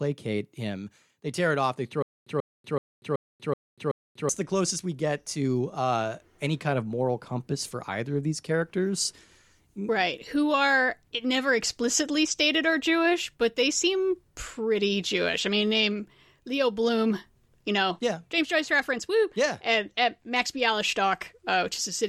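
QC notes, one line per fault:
2.02–4.29 s, stutter with silent gaps: playback likely stalled and kept retrying, replaying the last 137 ms fragment and then running dry, so the same burst returns six times, once every 378 ms, with 241 ms of digital silence between, and the speech that belonged there is lost.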